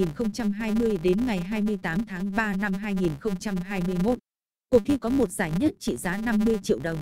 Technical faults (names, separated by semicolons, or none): filter restarted on every block